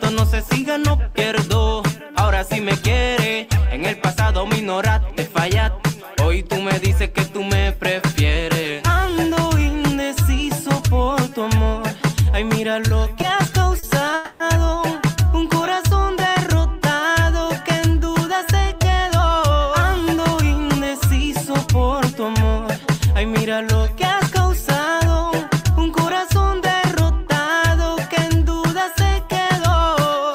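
From 12.88 to 13.84 s you get scattered short gaps, about three of them, where packets went missing or showed up late. The receiver covered each hole by carrying the last bit of sound forward, about 70 ms in total, with the longest patch around 40 ms. That's only about 7% of the stretch, so the audio stays clear between the gaps, which come through as small ticks and smears.

Right after that, at 14.15 to 14.41 s, there's a call audio freeze. For 250 ms the sound is held and stretched into a fading buzz or hiss that never drops to silence. Then it picks up exactly where it left off, so nothing is lost, but everything after it lands 250 ms later. The likely cause is packets stuck in transit long enough for the jitter buffer to run dry.

Later there are two stretches of jitter buffer speed-up, from 18.07 to 21.00 s and from 24.80 to 25.71 s, both running at 105%. The buffer had built up more delay than it wanted, so the receiver trimmed it back by repeatedly snipping out tiny pitch-period-sized pieces, roughly 150 ms in the first stretch and about 50 ms in the second. 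Pitch stays put, but at that rate the audio sounds noticeably hurried.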